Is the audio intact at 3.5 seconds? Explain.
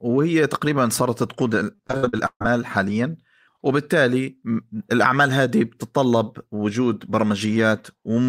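Yes, the speech at 3.5 seconds plays through intact, with no dropout, click, distortion or other technical fault at that point.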